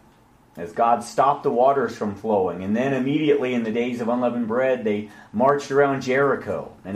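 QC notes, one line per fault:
No technical faults can be heard anywhere in the signal.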